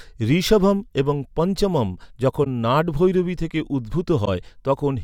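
Corrupt frame concealed at 2.44–2.47 s and 4.25–4.28 s: the decoder detected a damaged AAC frame and covered it, one frame each.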